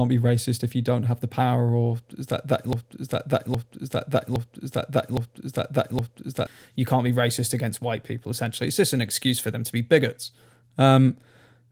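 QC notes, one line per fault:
2.73 to 6.47 s, broken-record loop: Right after "that that", a fragment of about 0.81 s plays five times back to back, each repeat identical. The sound then resumes at "you can't be racist". The likely cause is a player or stream stalling and resending the last chunk it held. The material that should have filled those seconds is gone.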